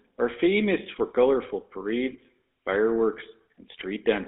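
Speech runs through the GSM full-rate codec for the whole clip. The band sits between about 300 Hz and 3.6 kHz. Coarse pulse excitation through a vocal-tract filter gives a plainly audible buzzy, gravelly roughness, consistent with 13 kbps coding. GSM bit errors break in at 2.06 to 2.17 s and again at 3.79 to 3.84 s. Corrupted filter, pitch and gain values warp the spectrum and level frame by frame, so the speech squawks and gargles. The damage fits a bit error rate near 1%.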